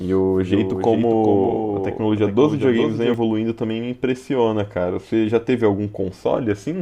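A speech recording opens with every syllable followed by a second copy of itself, about 5 dB quieter, trailing by roughly 400 ms. The copy is full-band, with no reverberant tail or room colour. This doubled audio track is already running when the clip begins and cuts off abruptly at 3.14 s. The likely cause is the same signal reaching the mix twice, once directly and once through a slower capture path or an edit that left two offset copies.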